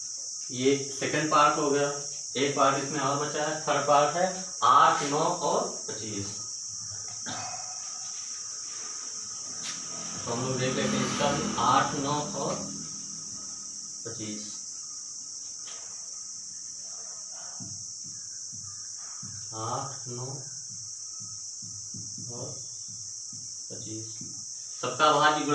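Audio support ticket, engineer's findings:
Nothing stood out on listening, so there is no symptom to log against any component.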